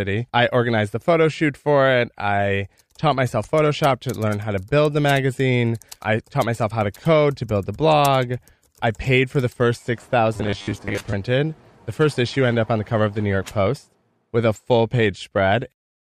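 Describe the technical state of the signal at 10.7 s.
At 10.7 s the speech is in the middle of robotic sound from repeated short buffers, running from 10.37 to 11.16 s, just after "paid for the first". Fresh audio likely reached the playback stage too slowly, so the last 10 ms segment was looped over and over to cover the gaps, with roughly half of the material being repeats and the real audio skipped. The loop imposes a fixed 100 Hz buzz, leaving the voice as a stiff, metallic drone that only loosely tracks the words.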